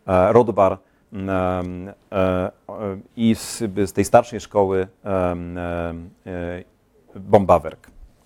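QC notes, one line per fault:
No faults found on the speech track; nothing flagged.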